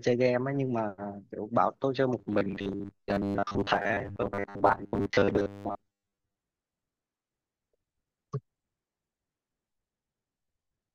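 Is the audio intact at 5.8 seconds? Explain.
No. From 2.19 to 6.35 s, audio likely arrives too seldom and short buffers are replayed over most of the span, causing robotic sound from repeated short buffers: a rigid, metallic 100 Hz buzz, which fits 10 ms repeats.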